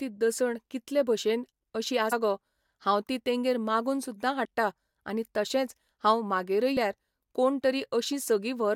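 At 2.11 s, just before "गो हांव ती तेंगेर", then at 4.44 s after "ती तेंगेर मागून सुद्दां" and at 6.76 s after "तशेंच हांव म्हागेरय", compressed frames are skipped. The speech jumps ahead by roughly 150 ms, a few tens of ms, and about 200 ms.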